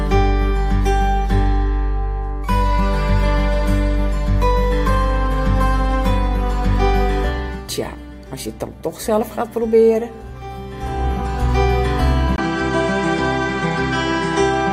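At 12.36 s a brief gap of about 20 ms is heard. After it, nothing above 8.9 kHz remains, so the sound turns duller. A faint new background noise appears, well below the signal, while the overall level stays about the same. The input likely switched to a poorer device.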